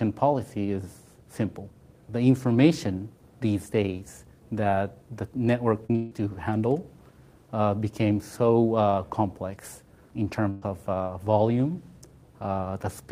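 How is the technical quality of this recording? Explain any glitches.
The recording has a cluster of network glitches just before the 6 second mark and one more near 10.5 seconds.

At 5.86 and again at 5.92 s there's short concealed packet loss: a few hundredths of a second went missing each time, so the receiver extended the preceding sound to cover the gap, leaving a quick smear or wobble.

Right after, from 5.96 to 6.12 s, the audio turns into a held, fading continuation of the last sound for about 150 ms and then picks up further along with that stretch gone. That's likely a long network dropout, patched over by the receiver rather than left silent.

From 10.50 to 10.63 s there's a burst of packet loss, about 120 ms missing in one go. The receiver stretched the last sound out and faded it down, so you hear a brief buzz or hiss before the audio jumps ahead.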